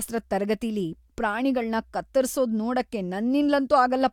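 No technical faults can be heard anywhere in the recording.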